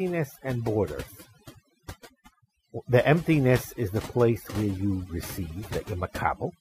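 Overdone noise removal runs through the whole speech clip: a noise reduction stage set too aggressively pulls individual frequency bands down whenever they sit close to its noise estimate, taking quiet parts of the voice with them. Pauses drop to near silence with twinkling specks.

From 4.72 to 4.83 s there is loose connector crackle, a short irregular burst of scratching. A worn or dirty contact is making and breaking rapidly, chopping the signal for about 110 ms.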